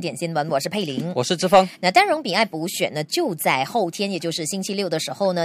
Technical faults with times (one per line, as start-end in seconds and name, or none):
none